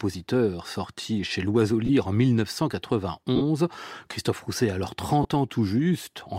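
Speech, with three short dropouts from lost LE Audio frames, at 1.86, 3.36 and 5.22 s. They last 30, 52.5 and 22.5 ms, which fits runs of 7.5 ms frames. The LC3 decoder repeats the last spectrum with random signs, so tones smear into noise.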